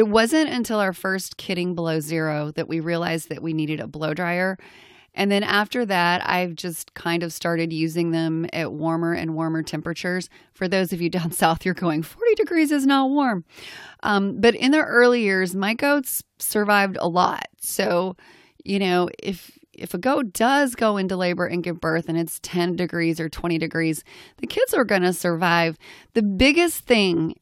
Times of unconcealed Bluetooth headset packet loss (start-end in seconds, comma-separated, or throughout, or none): none